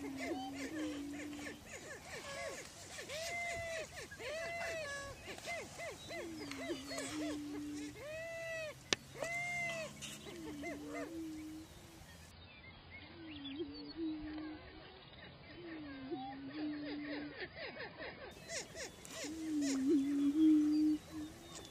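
It's a short audio clip, and from 12.31 to 18.31 s it plays the adaptive stream at a lower bitrate. For six seconds everything above 5 kHz vanishes and codec smearing sets in, which fits a drop from around 96 kbit/s AAC to roughly 16 kbit/s. The quality switches instantly, with no gap.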